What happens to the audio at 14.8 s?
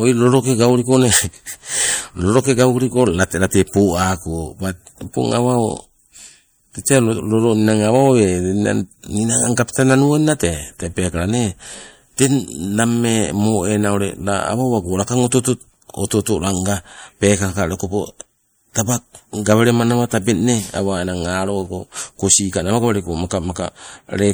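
At 14.8 s the speech sounds watery and swirly, with metallic chirps on s sounds, as it does for the whole clip. The likely cause is MP3 compression at a low bitrate, consistent with about 64 kbps, where the encoder drops weak components that flicker between frames.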